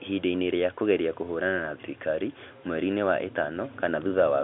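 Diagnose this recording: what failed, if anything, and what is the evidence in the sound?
Nothing failed; no audible fault anywhere in this recording.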